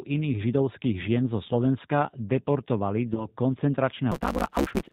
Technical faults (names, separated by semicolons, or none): G.729 codec; VoIP packet loss concealed by the speech codec; block size mismatch (truncated)